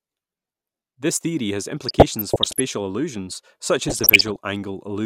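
From 1.84 to 2.60 s and again from 3.88 to 4.38 s the speech picks up DAB burbling: a bit error rate under one percent slips past error correction, corrupting samples and scale factors so individual sub-bands get short noisy blips or jump in level for up to a frame.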